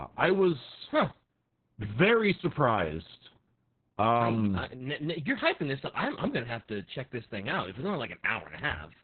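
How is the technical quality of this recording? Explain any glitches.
Quality is poor throughout: the speech is heavily damaged by Opus voice compression. Everything is narrowband, with nothing above about 4.3 kHz, and the SILK coder's coarse excitation makes voices muffled, hoarse and slightly robotic. That texture, not just missing treble, separates it from simple low-pass filtering, and points to a bitrate near 6 kbps.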